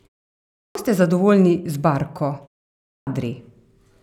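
At 0.5 s, after a 0.5 s silence, speech returns with a clipped start after a pause. About 250 ms is lost, up to 0.75 s. The output device has gone idle in the quiet and is slow to wake. So the onset is swallowed and the sound begins abruptly. It happens again at 2.8 s, after a 0.41 s gap. Roughly 270 ms disappears, up to 3.07 s. The pauses themselves fall properly silent.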